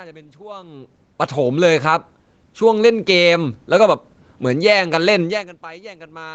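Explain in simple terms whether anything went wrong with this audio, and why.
Twice the whole recording, both the speech and the room noise behind it, slowly swells louder: first from 1.41 to 4.22 s, then again from 4.79 to 5.32 s. This is automatic gain rising. The call's level control judged the incoming sound too quiet and turned its volume up step by step. The second rise follows the talker moving away from the microphone around 5 s, which made the input much quieter.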